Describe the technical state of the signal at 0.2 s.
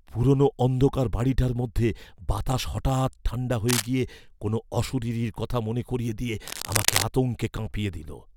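At 0.2 s the speech signal is intact, with no audible fault at that moment.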